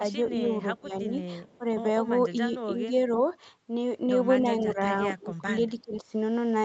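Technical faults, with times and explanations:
0.27–0.48 s, 0.81–1.13 s, 1.58–1.65 s, 2.74–2.85 s, 4.63–4.79 s, 5.20–5.47 s and 5.70–6.14 s: speech suppressed in double talk. The voice sinks in short patches. It is a slight dip around 0.3 s and 2.8 s, a clearer hole near 1 s, and the deepest, about 20 dB, at 5.2–5.5 s and 5.7–6.1 s. The likely cause is the far side talking at the same time, so the echo canceller could not tell this voice from loudspeaker echo and turned everything down.
1.47–1.57 s: echo leak. A very faint, brief ghost of the voice comes back about 319 ms behind the original, sitting far below the direct speech and easy to miss. This is likely loudspeaker playback at one end re-entering that end's microphone, with the echo canceller leaving a small residue uncancelled, which was then sent back down the call as a delayed copy.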